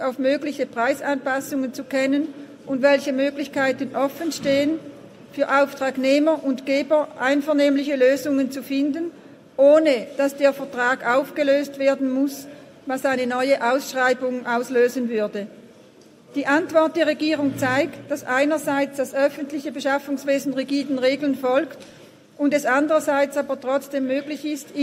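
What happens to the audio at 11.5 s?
Nothing goes wrong at 11.5 s; the audio plays through that moment intact, with no dropout, click, glitch or other fault.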